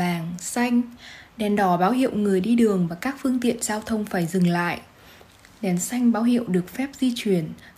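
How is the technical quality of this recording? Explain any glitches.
Nothing stood out as a technical problem on listening, and there are no glitches to explain.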